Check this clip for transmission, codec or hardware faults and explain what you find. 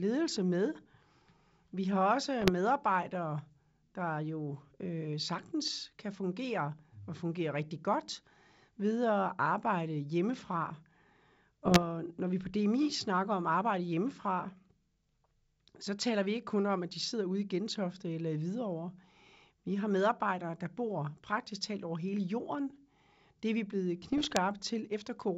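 Three short bursts of bit errors on an ADPCM link damage the speech, at 2.41–2.51 s, 11.64–11.87 s just before "når vi på", and 24.02–24.39 s right after "er vi blevet". The link itself is wideband G.722 coding, with its clear band up to 7 kHz audible around them. Flipped bits throw off the decoder's step size and predictor, so each error rings on as pops, rough grit and brief level jumps. That distinguishes it from packet loss, which leaves gaps or smoothed repeats rather than noisy bursts.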